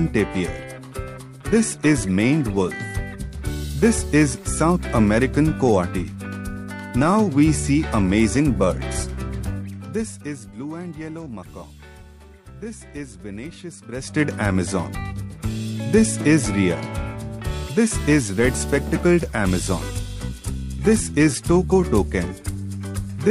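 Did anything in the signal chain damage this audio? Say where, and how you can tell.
Yes. From 9.44 to 10.46 s a fast ticking zipper noise rides a roughly 15 dB level drop. At about 50 steps a second, the gain stage is applying unsmoothed stepped jumps.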